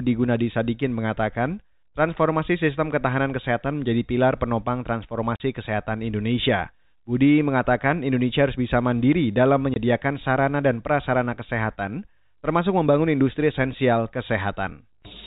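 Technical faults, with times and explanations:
5.36–5.40 s and 9.74–9.76 s, packet loss filled with silence: the speech drops out in two abrupt holes, about 40 ms and then 20 ms long, with hard edges where the waveform is cut off and resumes. Lost packets were replaced with digital silence rather than concealed. Both gaps are whole multiples of 20 ms, which fits two lost 20 ms packets and then one. The sound around them is telephone-band G.711, with nothing above 4 kHz.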